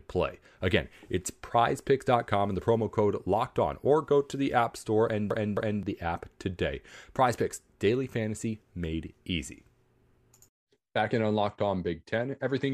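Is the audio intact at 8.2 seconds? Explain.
Yes, the speech at 8.2 seconds plays through cleanly with no dropout, click, distortion or other fault at that moment.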